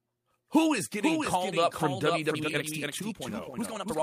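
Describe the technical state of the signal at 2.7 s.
At 2.7 s the speech sits inside a time-stretched section running from 2.31 s to the end, starting just after "getting called up from". The pace jumps to about 1.73 times normal while pitch holds, likely from software dropping short slices to fit a shorter length, so it sounds rushed.

A doubled audio track also runs through this moment: a full-band copy trails about half a second behind, roughly 5 dB quieter, with no decay or room colour. It is likely a second, slower capture path mixed in alongside the original.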